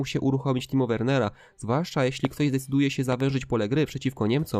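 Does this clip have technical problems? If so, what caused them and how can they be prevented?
Yes. There are loud pops. The first runs from 2.25 to 2.27 s and is a single sharp pop, peaking roughly 15 dB above the sound. The second, from 3.12 to 3.22 s, is a quick double pop, about 10 dB above the sound. Each time, the sound carries on underneath. The likely cause is a sudden voltage step from a plug, switch, static discharge or driver glitch. The circuits after it shape that step into a thump. To prevent this, secure connections, mute before switching, and keep drivers stable.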